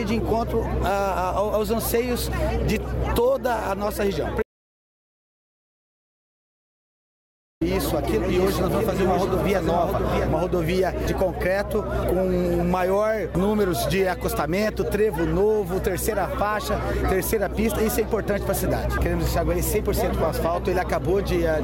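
From 4.42 to 7.61 s, an audio dropout to silence removes about 3.2 s; the signal cuts to silence, likely from a lost input.

From 8.29 to 10.29 s, a doubled audio track appears, likely from a second capture path: a dry copy trails about 0.7 s behind, roughly 5 dB quieter, starting and stopping abruptly.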